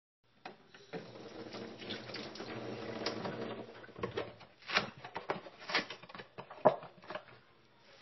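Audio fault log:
Throughout: MP3 compression. The sound was likely pushed through an MP3 encoder starved of bits, which fits a rate near 24 kbps. Short of data, the encoder discarded everything above 5.8 kHz, so the top end is sheared off flat and the audio sounds dull and closed in. It also dropped weak frequency lines that flicker in and out between frames, leaving a plainly audible watery, swirling texture with smeared attacks.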